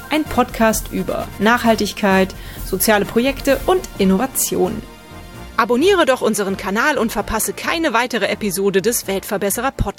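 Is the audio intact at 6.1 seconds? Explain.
Yes, at 6.1 seconds the audio runs on without any dropout, click, distortion or other audible fault.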